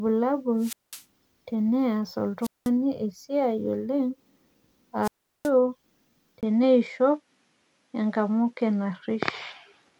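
A speech recording with three wireless microphone squelch dropouts, at 0.58 to 1.04 s, 2.41 to 2.70 s and 5.02 to 5.50 s. As the radio signal fades, hiss swells, then the receiver's squelch mutes the output for about 200 ms, 196 ms and 374 ms respectively before the voice returns. The rising static just before each hole distinguishes this from a network dropout or a noise gate closing, which cut to silence without that warning noise. From 6.41 s to the end, a 20 ms silence is followed by a change in tone: the top end now stops at 11.4 kHz, with a faint new noise floor roughly 55 dB down, while the level barely moves. This is likely an input switched to a poorer device. The unchanged loudness, together with the sudden narrower band and the different background, points to another microphone taking over rather than a gain or EQ change.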